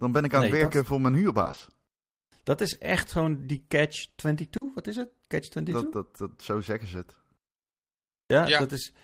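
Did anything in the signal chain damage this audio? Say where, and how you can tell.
Yes, the network stage damaged it. From 1.43 to 1.63 s, just after "het werken voor mijn", the speech turns choppy and robotic. This is repeated packet loss: half that stretch is filled by extending the last sound, which fits five lost 20 ms packets. The holes keep recurring, unlike a single drop.

A short concealed packet loss follows at 4.57 to 4.63 s, right after "echt gewoon die catch". One 40 ms hole is bridged by continuing the preceding sound, heard as a brief smear before the real audio blends back in. It is one isolated patch, not a recurring chop.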